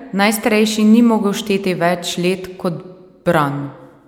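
No technical faults can be heard anywhere in this speech recording. There is nothing to place in time or explain.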